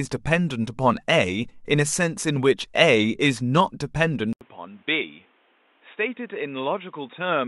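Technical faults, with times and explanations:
4.33–7.47 s: input switched to a poorer device, likely. After a short gap of about 80 ms the speech drops roughly 10 dB, loses everything above 3.8 kHz so it turns dull and boxy, and picks up a new noise floor around 35 dB down, which is the new device's own character taking over.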